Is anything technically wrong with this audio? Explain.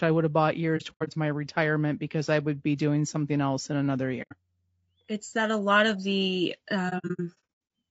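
Yes. Two faults can be heard in this speech clip.

Low-delay AAC compression, throughout: the grainy, rough texture most likely comes from AAC-ELD, the low-delay AAC used in video calls. Its short frames cannot separate the pitch harmonics cleanly, so at a rate that sounds like about 32 kbps the coder runs short of bits. Noise fills the gaps between harmonics and the top band sounds dull or synthetic, and the damage is plainly audible.

AAC frame loss with muting, at 0.77–1.09 s, 4.22–4.33 s and 6.89–7.36 s: frames went missing and the decoder replaced them with silence. The overlapping windows fade each gap in and out, so the holes have soft edges. The first gap follows "I would have bought" and ends before "my retirement because I". About 150 ms is lost there in pieces spread over 300 ms, the longest run around a tenth of a second. The second, a single 90 ms hole, follows "something else in another". 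The third, after "a lot of the", drops about 390 ms scattered across 810 ms, again in runs of up to about a tenth of a second.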